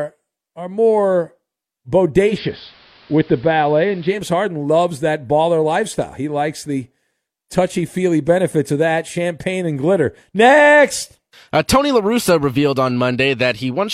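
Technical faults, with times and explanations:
2.24 to 4.21 s, digital radio blending to analogue: the receiver lost the digital stream and cross-faded over about 150 ms to the station's AM broadcast, then returned. On the AM side the speech loses its treble, so it turns dull and boxy. A steady hiss rises to roughly 30 dB below the speech, and the level shifts by about 1 dB at each blend.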